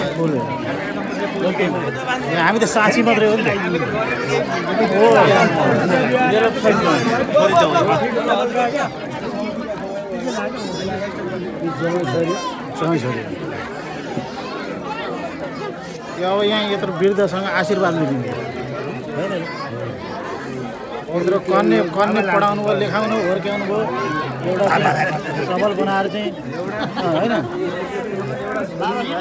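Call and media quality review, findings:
Resampler restarted on every block: steady 25 Hz tick-buzz throughout, only with signal. Per-block conversion, edge errors every 40 ms; the top end capped near 8 kHz fits a 16 kHz output.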